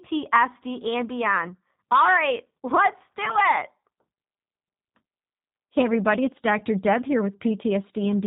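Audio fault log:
throughout G.729 codec: The speech passes through a low-rate CELP coder, which fits an 8 kbit/s G.729A stream, rebuilding it from a vocal tract filter, pitch predictor and sparse pulses. Nothing above 4 kHz survives, and the plainly audible coding leaves the voice rough and synthetic.
3.25–3.37 s and 6.59–6.61 s VoIP packet loss concealed by the speech codec: Each gap sounds like a single lost 10 ms frame that the decoder filled by extending its last pitch and filter at falling gain. That causes a brief stretched, fading sound, and at 3.25 s the voice stays weak or distorted until about 3.37 s while the frames rebuild.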